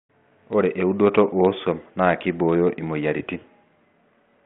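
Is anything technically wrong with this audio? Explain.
No, nothing technically wrong stands out here.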